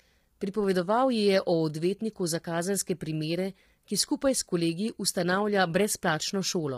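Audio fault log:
Throughout, low-delay AAC compression: the speech is rough and grainy, with noise filling between harmonics. It's likely short-frame AAC-ELD, heavily starved, fitting roughly 24 kbps.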